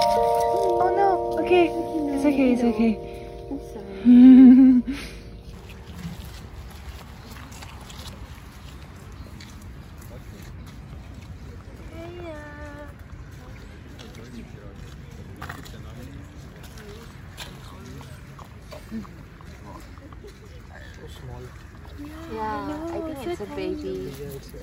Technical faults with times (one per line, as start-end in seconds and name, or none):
none